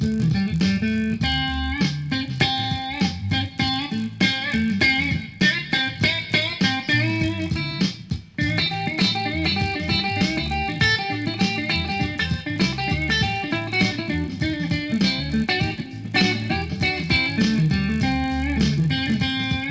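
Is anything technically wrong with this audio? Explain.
Yes. All the way through, a resampler restarted on every block converts each 20 ms chunk in isolation, so every block edge glitches, leaving a 50 Hz buzz riding on the sound.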